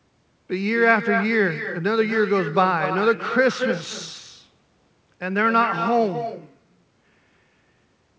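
With no echo canceller, the far-end loudspeaker leaks back, shadowing the speech throughout with a thinner copy about 9 dB down, roughly a fifth of a second late.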